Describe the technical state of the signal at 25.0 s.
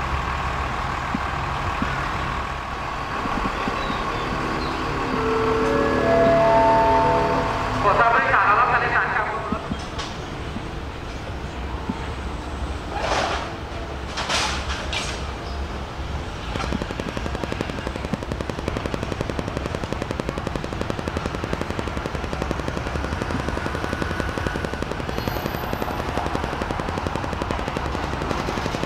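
At 25.0 s the signal carries a train of clicks. It runs from 16.56 s to 28.85 s, right to the end. The pulses arrive at a steady 11.2 per second, around 150 in all. Each has much the same shape, peaking roughly 15 dB above the sound beneath. The source is likely electrical interference or a faulty connection or power supply injecting repeated pulses. It is heard as a regular, rapid ticking laid over everything, gaps included.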